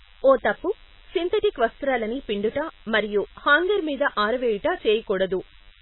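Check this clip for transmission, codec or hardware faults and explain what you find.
Three faults are present: a constant DECT buzz, heavy lossy-codec damage, and one click.

DECT cordless phone buzz, throughout: a nearby handset or base station transmits a radio burst every 10 ms, which the audio circuitry rectifies into sound. The result is a thin, steady 100 Hz buzz rich in harmonics, sitting roughly 30 dB below the speech.

Heavy codec damage, throughout: the speech is dull and watery, with the treble cut off and weak detail fluttering in and out. This is likely MP3 compression at a very low bitrate, around 16 kbps, where the encoder cuts the treble and discards quiet frequency components frame by frame.

Dropped samples at 0.87 s, between "ఓ తప్పు" and "సింధటిక్ వస్త్రాలని": a single sharp click is heard. The waveform jumps abruptly where probably only a single sample went missing, far too brief to remove any sound, leaving just the tick.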